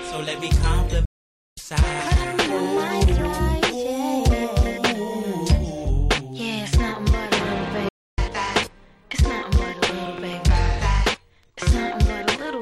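At 1.05 s the sound just drops out for about half a second, picking up again at 1.57 s, then does it again from 7.89 to 8.18 s for roughly 0.29 s. That's a playback stall, likely the player starving for data or its thread getting blocked.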